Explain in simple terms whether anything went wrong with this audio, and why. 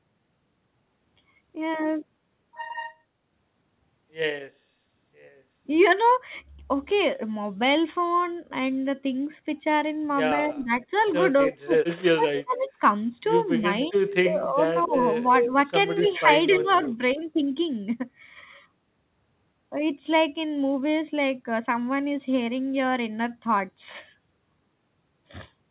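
Between about 10.5 and 17.2 seconds, the speech keeps dipping or cutting out in pieces, at 10.51, 11.6, 13.61 and 16.02 s. This is likely speech suppressed in double talk, where the call's echo control turned the voice itself down while both sides spoke.

At 10.63, 12.36, 13.6 and 16.08 s, a second copy of the voice trails about 0.27 s behind, loudest around 13.6 to 15.5 s. This is likely echo leak: an added delayed repeat, not a missing voice.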